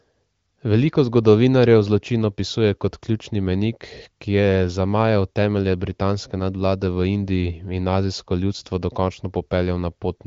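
Nothing stood out on listening to this speech recording.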